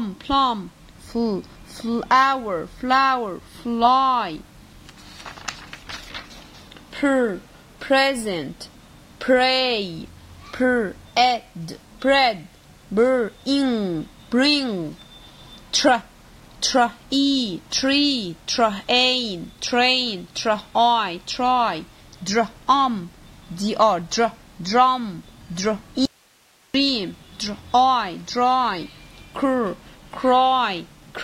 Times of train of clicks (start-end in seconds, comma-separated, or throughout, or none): none